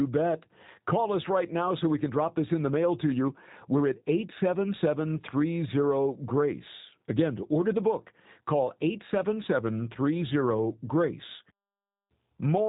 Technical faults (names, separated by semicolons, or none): G.729 codec